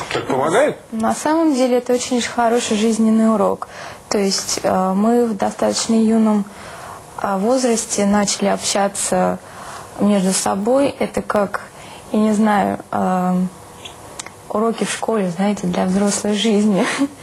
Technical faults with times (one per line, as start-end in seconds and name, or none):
10.63-11.54 CD scratch ticks